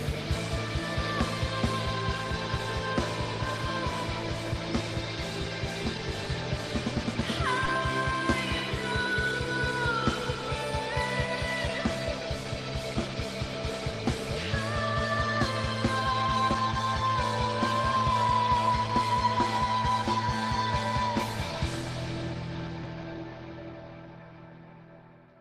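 Short concealed packet loss occurs twice, at 7.65 to 7.69 s and 22.83 to 22.87 s. Each time, 20 ms of audio arrived too late and the receiver filled it in, leaving a brief smear.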